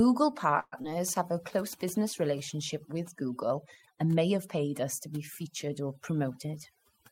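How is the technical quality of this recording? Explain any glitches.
The technical quality is poor, with heavy processing throughout and two call-transport glitches early in the speech.

Overdone noise removal runs the whole length. The suppressor treats any frequency band near its noise estimate as noise and pulls it down hard, taking quiet parts of the voice with it. The background drops and breaks up into twinkling specks.

A call audio freeze runs from 0.59 to 0.74 s. The last sound is stretched into a fading continuation for about 127 ms, with roughly 10 ms of true silence. The likely cause is late packets emptying the jitter buffer. When they arrive, playback resumes where it stopped, so the speech is delayed but nothing is lost.

Short concealed packet loss follows at 0.82 to 0.86 s. About 40 ms of audio never reached the decoder, and the receiver covered the hole with 17 ms of continuation from the preceding sound before blending back. 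Timing pulls forward by roughly 20 ms, and the result is a brief smear where a short sound may vanish.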